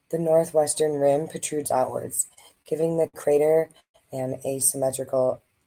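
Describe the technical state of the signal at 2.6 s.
At 2.6 s the signal is inside a run of repeated stalls (stutter) lasting from 2.15 to 3.96 s. Seventeen times in that span, packets arrived late or more slowly than playback, so the jitter buffer emptied and the receiver stretched the last sound to cover the wait, fading it on the longer waits, the longest being 143 ms. About 390 ms in all is concealed, roughly a fifth of the span, and nothing is lost. The audio drags and stutters rather than dropping out.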